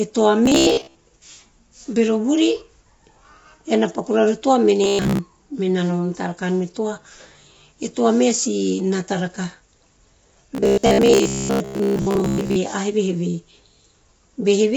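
Throughout, the speech sounds rough and grainy, with noise between the harmonics and a lowered top band. That is likely low-delay AAC compression, AAC-ELD, whose short frames resolve pitch poorly; the damage points to a low bitrate around 24 kbps.

From 0.46 to 0.95 s, 4.84 to 5.19 s just after "toa mene", and 10.55 to 12.56 s, the speech becomes a rigid metallic buzz at 66.7 Hz. This robotic sound from repeated short buffers likely comes from late audio being patched by replaying about 15 ms chunks, covering most of each stretch.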